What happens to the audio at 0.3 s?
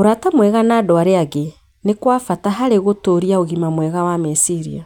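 Nothing goes wrong at 0.3 s; the speech there plays through intact, with no dropout, click, distortion or other fault.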